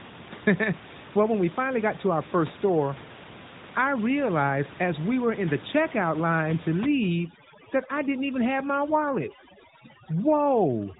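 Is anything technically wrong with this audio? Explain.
Yes. Overdone noise removal begins at 6.82 s, just after "the checkout line to", and lasts until the clip ends at 10.99 s. A noise reducer set too aggressively pushes single frequency bands far down wherever they sit close to its noise estimate, and quieter parts of the speech get removed along with the room noise. The background drops and breaks up into twinkling specks, and the speech sits within a narrowband mobile-codec sound that has nothing above about 3.8 kHz.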